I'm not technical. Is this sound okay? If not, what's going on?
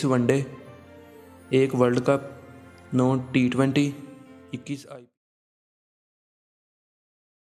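Yes, nothing in the signal is technically wrong, and the gentle fade-out from about 4 seconds that ends at 5.18 s is a smooth, deliberate edit rather than a problem.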